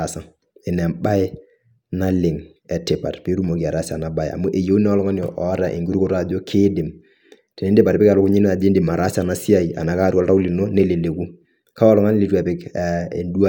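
Nothing in the recording stood out as a technical problem on listening.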